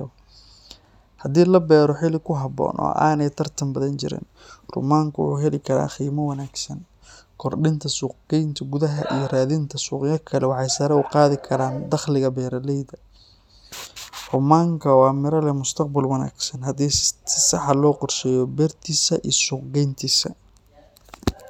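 No technical faults are audible.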